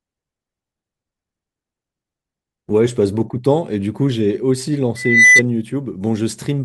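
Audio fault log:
4.96–5.42 s, loudspeaker feedback squeal: a lone 2 kHz tone swells over roughly a third of a second to about 10 dB above the speech. The microphone picked up its own loudspeaker, and at that frequency loop gain exceeded one. Unlike a steady interfering whistle, it grows by itself.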